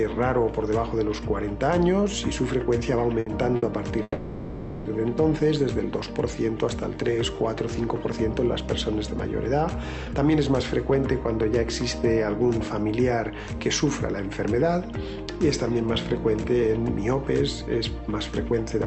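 The audio passes through a call link whose top end stops near 8 kHz, with the light coding grain of an Opus-style codec. Early on, the sound catches twice: at 3.19 to 3.28 s the last sound is held and smeared with a faint buzz for about 70 ms, and at 3.56 to 3.64 s the same happens for about 60 ms. Each is a short stall from a late packet. The jitter buffer ran dry, so the receiver stretched what it last had until the packet turned up, then resumed at the same point with nothing lost.

From 4.02 to 4.87 s comes a longer call audio freeze. The sound hangs as a fading buzz for roughly 0.83 s, including about 30 ms of near silence, before picking up exactly where it stopped. The likely cause is packets held up in transit, which emptied the jitter buffer. A gap was inserted into the stream, but none of the audio is missing.

Later the audio hurries without any change in pitch. This is a jitter buffer speed-up, where the receiver trims small pitch-period slices to shed built-up delay. 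The strongest spell is 10.05 to 10.92 s at 116% speed, cutting around 150 ms. Milder ones follow at 12.43 to 13.46 s at 105% (about 50 ms removed), 14.33 to 15.83 s at 106% (about 100 ms), and 16.53 s to the end at 105% (about 100 ms).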